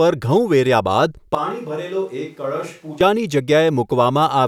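A speech recording with a switch to a distant microphone from 1.35 s to 3.01 s: the voice abruptly turns roomy and hollow, loses bass, and drops by roughly 10 dB, with background noise rising to around 35 dB below the speech, then snaps back. The likely cause is the close microphone dropping out in favour of one farther away. The waveform shows a sudden step down in amplitude, and the spectrogram shows thinner low frequencies, smeared reverberant tails and a raised noise floor across that span.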